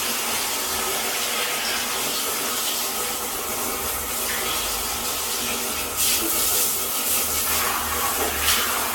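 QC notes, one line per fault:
throughout: generation loss. The sound is swirly and hollow, with smeared, blurred attacks and nothing above 17 kHz. The artefacts are heavier than a single encode at this bandwidth would give, which points to a 96 kbit/s AAC-LC chain. The likely cause is around seven decode and re-encode passes, each quantising on a shifted frame grid so that noise and spectral holes accumulate. A single low-bitrate encode would sound thinner but cleaner, without this layered swirl.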